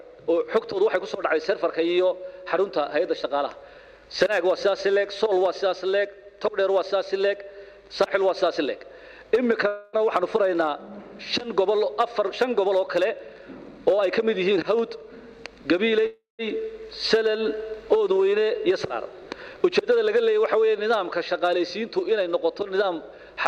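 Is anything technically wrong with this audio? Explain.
Yes. There are two call audio freezes and two jitter buffer speed-ups.

At 9.67 to 9.99 s and 16.06 to 16.41 s, the last sound is stretched into a fading buzz for about 0.26 s and 0.33 s, the second decaying into about 0.15 s of silence. The likely cause is delayed packets draining the jitter buffer. Playback then resumes where it stopped, so nothing is lost but a gap is inserted.

From 13.14 to 15.79 s the audio plays about 10% fast, and at 23.15 to 23.37 s about 27% fast, at unchanged pitch. The receiver is trimming repeated pitch-period slices to shed excess buffered delay, roughly 0.3 s and 0.07 s, so those passages sound rushed.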